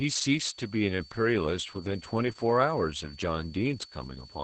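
From start to end, a switching supply whistle sits under the speech as a thin, steady high tone that wanders between about 4.46 and 4.53 kHz, roughly 25 dB below the speech. A nearby switching power supply is running at a rate low enough to reach the audible band. On a spectrogram it appears as a narrow horizontal line near 4.5 kHz with a slight waver, unbroken through pauses and syllables alike.

Across the whole clip, the speech also carries heavy Opus voice compression damage. The coding is the SILK linear-prediction type at wideband, so nothing survives above 8 kHz. Very few bits are left for the excitation, which fits a bitrate around 10 kbps. Voiced sounds come out hoarse, slightly buzzy and faintly robotic. The spectrogram shows a hard ceiling at 8 kHz, smeared harmonics, and texture changing in blocks that match 20 ms frames.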